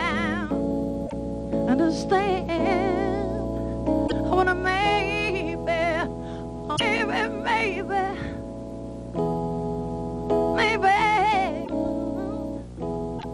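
Corrupted bytes in the compressed stream leave the decoder unable to parse certain frames, so it loses sync and hunts for the next valid frame header. Each time this damaged data in the compressed stream is hit, a short chirp, squawk, click or hole of about 80 to 100 ms breaks through the sound: at 1.03 to 1.13 s, 4.04 to 4.12 s, 6.73 to 6.81 s, 11.61 to 11.70 s, and 13.15 to 13.25 s.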